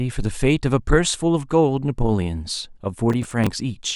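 From 3.1 to 3.47 s, a burst of gritty, tearing crackle rides on top of the speech, made of small hard-edged snags of repeated audio, and it stops as abruptly as it starts. This is processor overload crackle: the processor fell behind and missed a run of buffer deadlines, around seven of them, each replaced by stale audio. The spacing of the snags fits buffers of roughly 5 ms.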